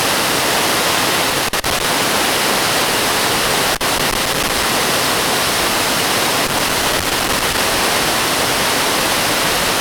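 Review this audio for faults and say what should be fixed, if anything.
A worn or dirty contact somewhere in the signal chain is making and breaking as it shifts, which chops the audio on and off and lets any DC on the line snap in as pops. The result is loose connector crackle: irregular bursts of scratchy crackle from 1.30 to 1.84 s, 3.75 to 4.63 s and 6.47 to 7.58 s, each lasting roughly half a second to a second. To prevent it, clean or replace the suspect connector and secure the cable so it cannot move.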